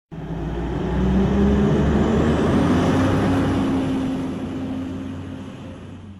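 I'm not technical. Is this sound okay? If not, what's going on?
Yes, nothing here sounds wrong.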